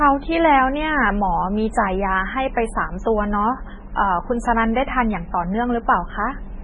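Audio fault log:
Throughout, MP3 compression: the speech has a watery, swirling texture and nothing above 10.3 kHz, so s sounds lose their crispness and take on metallic chirps. The likely cause is heavy MP3 encoding at a rate that points to roughly 16 kbps. Starved of bits, the encoder cuts the treble at a fixed frequency and zeroes weaker spectral lines, which flicker on and off between frames, causing the swirl and smearing consonant attacks.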